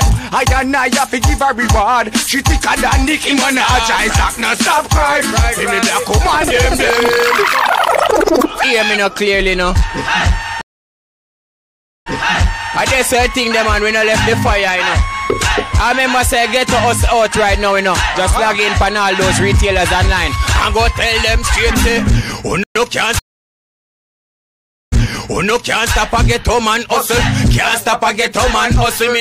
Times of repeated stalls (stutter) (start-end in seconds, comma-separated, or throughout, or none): none